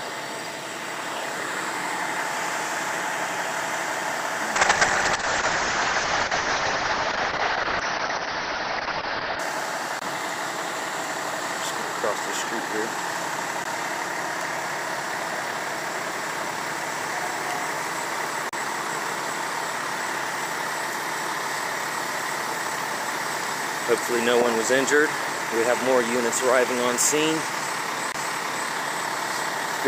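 From 4.57 to 9.45 s, a call bitrate drop makes the sound rough and muffled. Highs vanish above 6 kHz, which points to a fall from around 128 to 6 kbps.

CD skips occur at 9.99 to 10.02 s, 13.64 s, 18.49 to 18.53 s, and 28.12 to 28.14 s. The laser jumps tracks. Each gives a tick, a brief mute, then a jump.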